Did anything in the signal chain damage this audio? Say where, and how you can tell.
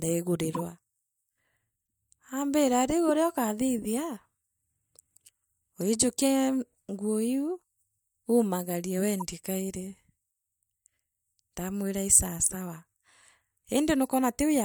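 Yes, at the codec decoder. A corrupt frame was decoded at 0.52 to 0.60 s, at 3.08 s between "aambira riu" and "uria ukathithia", at 5.81 to 5.83 s and at 9.18 to 9.24 s. Damaged bits put energy at the wrong frequencies. Each is heard as a brief chirp, squeak, blip or burst of noise.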